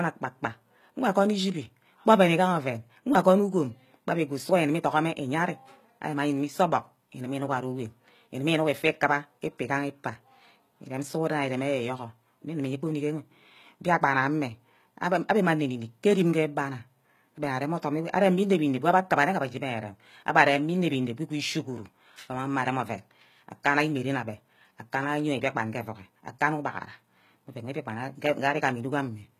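From start to finish the speech carries plainly audible damage that is likely HE-AAC compression at a low bitrate, something near 20 kbps. The codec keeps only the lower spectrum and synthesises the treble by copying lower bands upward under a coarse envelope, so the top end reaches higher than plain AAC would but its harmonics no longer line up with the real ones. S sounds come out gritty and lispy, and nothing is left above about 14.9 kHz.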